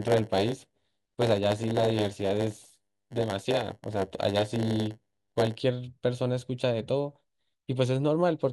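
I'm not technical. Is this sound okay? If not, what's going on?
No. From the start to 5.61 s there's a block size mismatch (padded). One part of the system hands over smaller chunks than the next expects and fills the gaps with silence. That puts a 100 Hz buzz over the speech and slows it to about 92% speed without changing the character of the voice.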